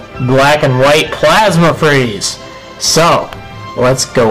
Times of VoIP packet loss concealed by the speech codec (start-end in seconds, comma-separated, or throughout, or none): none